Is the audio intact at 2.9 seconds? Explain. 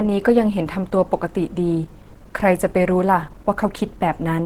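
No. Throughout the clip, likely Opus compression at a low rate near 16 kbps, running in hybrid speech mode, leaves the speech at 2.9 s plainly muffled and hoarse.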